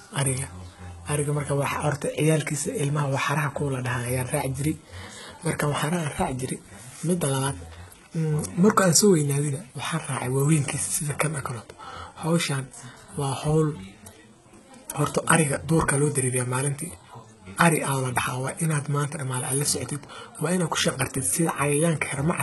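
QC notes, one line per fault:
Throughout, HE-AAC compression: the encoder likely coded only the lower spectrum and rebuilt the treble by copying lower bands upward under a coarse envelope, damage that fits a very low bitrate of around 16 kbps. The top end sounds synthetic, with harmonics that don't line up above the crossover, so s sounds come out gritty, metallic or lispy. Nothing is present above 11.8 kHz, and the coding damage is heavy.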